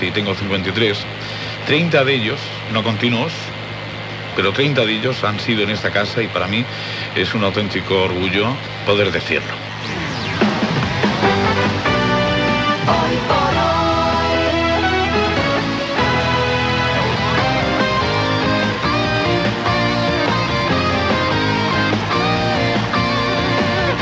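Nothing stood out on listening; the sound carries the narrow top end of a call path, with nothing above about 8 kHz, which fits a wideband call codec.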